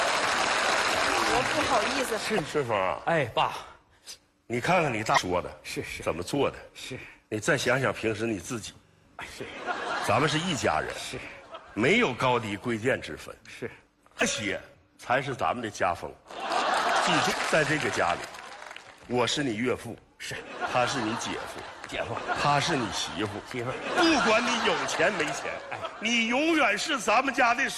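At 2.34 to 2.40 s, 5.14 to 5.19 s, 14.17 to 14.23 s and 17.28 to 17.34 s there are short bursts of damaged data in a compressed stream, each lasting under 60 ms. In each, corrupted bytes make the decoder misread frames and lose sync until it finds the next valid frame header. The garbled output comes through as a brief chirp, squawk, click or short hole cutting across the sound.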